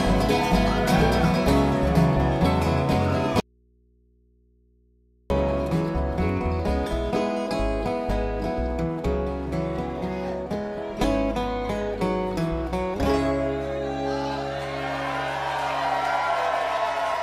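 The signal feed was most likely lost while the path after the break stayed live, producing an audio dropout to a faint residue from 3.40 to 5.30 s. For about 1.9 s the sound cuts out abruptly, leaving only mains hum roughly 40 dB below the signal.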